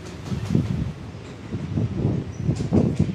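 Sounds, but the whole clip has audio read two samples at a time, giving double speed. Everything plays at 2.0 times its proper rate and an octave high. The reader took sample pairs as single frames.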